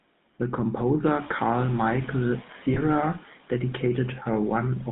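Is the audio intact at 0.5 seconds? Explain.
No. The GSM full-rate codec affects the whole clip, including 0.5 s. It models the vocal tract and excites it with sparse, regularly spaced pulses. The band runs only from 150 Hz to 3.7 kHz. The speech sounds plainly buzzy and gravelly.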